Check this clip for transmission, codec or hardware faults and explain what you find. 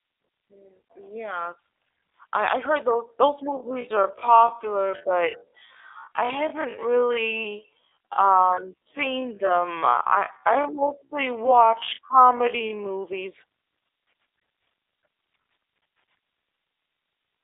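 Two faults are present: codec damage across the whole clip and one slowed section.

The G.729 codec damage runs throughout. The speech is rebuilt from a vocal tract model and a few pulses per frame, which fits an 8 kbit/s G.729A stream. Nothing passes above 3.7 kHz. The result sounds rough and synthetic.

A time-stretched section runs from 3.49 to 13.03 s. The pace drops abruptly to about 0.56 times normal while the pitch holds steady. This is likely from software repeating short pieces to lengthen the audio. It sounds dragged.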